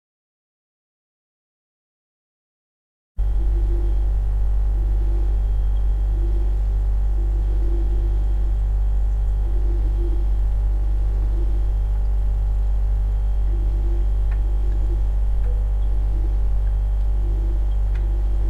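No technical faults can be heard anywhere in this recording of sounds. Nothing in it calls for a timestamp or a note of any kind.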